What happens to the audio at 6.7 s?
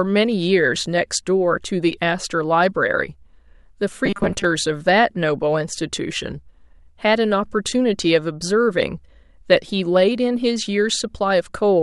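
Nothing goes wrong at 6.7 s; the audio there plays through intact, with no dropout, click, distortion or other fault.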